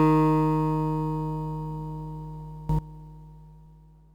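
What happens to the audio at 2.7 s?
A sudden gain jump occurs from 2.69 to 2.79 s. For that short stretch the level leaps by about 18 dB from one sample to the next, with no ramp at either edge, and then drops back just as abruptly. The likely cause is a digital gain setting or bit shift applied instantly. Because the change sits on the whole signal, the sound and its background noise surge and fall together in one hard step.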